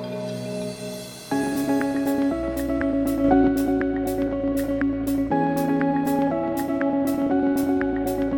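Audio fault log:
3.24–3.48 s sudden gain jump: sound and background noise step up together by about 4 dB with no ramp, likely an instantly applied gain change, unlike a louder passage.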